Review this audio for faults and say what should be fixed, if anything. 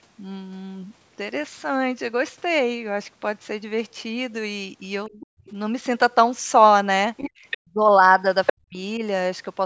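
Speech suppressed in double talk occurs at 5.08–5.18 s, 7.59–8.01 s and 8.52–9.02 s. The talker's speech sinks by about 25 dB in the first brief dip and by about 40 dB in the two longer ones. The likely cause is the echo canceller failing to tell the near talker from loudspeaker echo while both sides spoke, so it attenuated everything. A double-talk detector that holds adaptation and limits suppression when near-end speech is present would prevent this.

The other side's voice leaking through is heard at 5.21–5.53 s, 7.17–7.58 s and 8.46–8.52 s. A second voice sits behind the talker at about 25 dB below the speech, then about 10 dB below, and finally at roughly equal level just before the last dip. This is likely residual loudspeaker echo that the canceller did not fully remove from the microphone. The band-limit at 8 kHz from the call's microphone processing does not hide it. Better acoustic isolation or headphones, plus a longer, well-converged echo filter, would prevent this.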